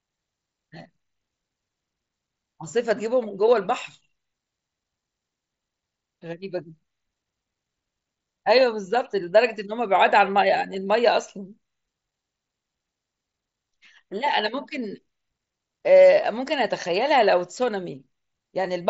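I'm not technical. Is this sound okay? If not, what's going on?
Yes, no faults here.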